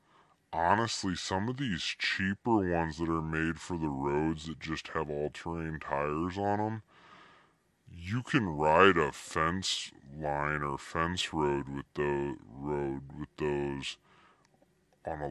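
Throughout, the speech runs slow and low, at 0.726 speed and about 5.5 semitones flat: a wrong sample rate, consistent with 44.1 kHz audio played at 32 kHz.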